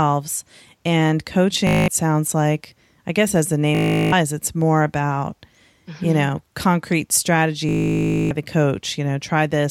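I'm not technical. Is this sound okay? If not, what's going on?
No. The speech breaks up three times into a rapid buzzing, machine-gun stutter: from 1.67 to 1.88 s, from 3.75 to 4.12 s, and from 7.69 to 8.31 s. This is Bluetooth stutter. The wireless link dropped chunks of audio, so the receiver kept replaying the last tiny slice it had. When new audio arrived, the speech picked up later, skipping what was lost: about 0.2, 0.37 and 0.62 seconds.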